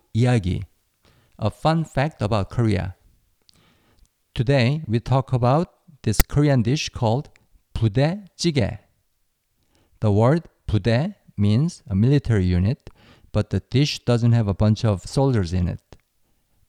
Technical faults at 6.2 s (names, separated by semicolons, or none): file tags played as audio